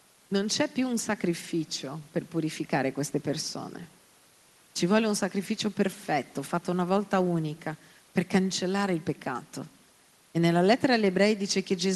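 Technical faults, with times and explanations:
No technical faults turn up anywhere in this speech recording, so there's nothing to list here.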